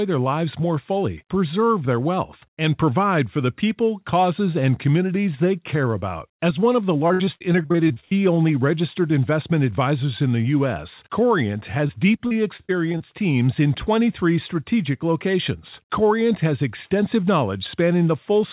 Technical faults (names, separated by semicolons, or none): repeated packet loss (robotic sound); short concealed packet loss